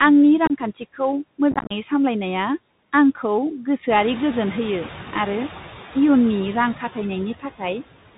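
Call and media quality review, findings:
Noise suppressor artifacts, whole clip: background pulled down by about 13 dB. Frame-by-frame band gains chasing the noise estimate. Spectrogram: mottled, flickering noise floor in pauses, filling back in under speech.

Bluetooth CVSD headset codec, whole clip: band-limited, scratchy sibilants, granular hiss riding under speech, consistent with 64 kbps CVSD. The adaptive step lags loud high content and slope-overloads. Spectrogram: hard ceiling at 4 kHz, nothing above; grainy broadband texture below it.

Unconcealed Bluetooth headset packet loss at 0.46–0.52 s: about 30 ms missing within roughly 38 ms, longest gap 26 ms, a handful of packets. Second burst at 1.52–1.72 s: about 128 ms lost across 195 ms, longest gap 34 ms, rough chopped crackle. Waveform: flat dropouts with vertical edges.

Noise suppressor catching up, 3.89–4.88 s: room noise jumps about 14 dB near 4.0 s, reaching about 18 dB below speech, and passes with only about 4 dB reduction. 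Noise estimate lags, adapting over 990 ms. Spectrogram: bright noise band fading down over that second.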